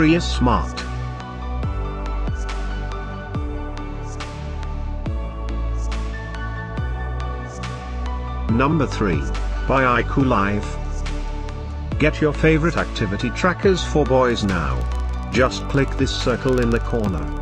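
From about 14.30 s to the end at 17.41 s, you get a filter restarted on every block. The filter is dropping its memory at each block boundary and starting again from silence, so every block opens with a little transient. Those repeat at roughly 21.5 Hz, which fits a 2048-sample block. You hear it as a low, regular ticking buzz under the sound, getting stronger and weaker as the level moves.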